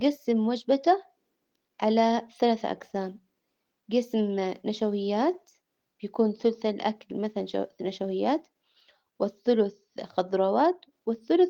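No faults in this speech; the Opus voice compression leaves only light coding texture and keeps the full band, which fits a hybrid mode at around 20 kbps.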